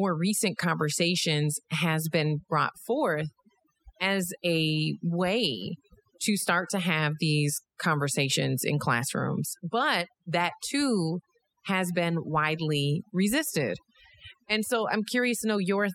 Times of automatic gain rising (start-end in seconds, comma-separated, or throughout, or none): none